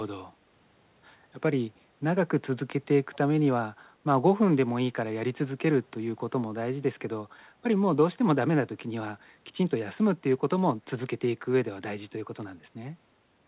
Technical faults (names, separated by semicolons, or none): echo leak